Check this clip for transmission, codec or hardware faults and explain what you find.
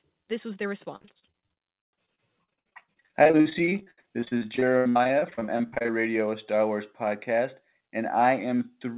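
One transmission fault stands out: repeated packet loss (robotic sound) from 0.96 to 5.90 s. Packets kept going missing, the longest hole lasting 77 ms, and each was patched by stretching the preceding sound, covering roughly a third of that span. The speech turns choppy, with fragments missing. The call path itself, whose hard ceiling at 4 kHz points to G.711 mu-law telephony, carries the familiar narrowband tone.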